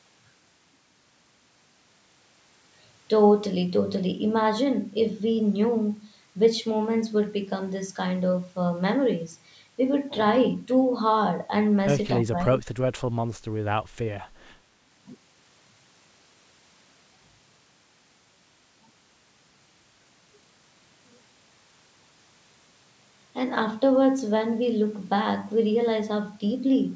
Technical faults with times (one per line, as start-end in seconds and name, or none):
12.18-12.63 speech suppressed in double talk